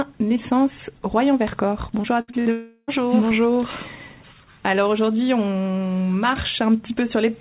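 Repeated packet loss (robotic sound) runs from 2.02 to 2.48 s: four short holes, the longest 61 ms, are each patched by stretching the preceding sound, so nearly a third of that span is filler and the audio turns choppy and clipped.

A long network dropout likely follows from 2.52 to 2.90 s. The last sound is drawn out as a fading buzz for about a third of a second, ending in roughly 40 ms of silence, and the audio resumes with that stretch missing, band-limited throughout to 4 kHz by what sounds like a G.711 mu-law call codec.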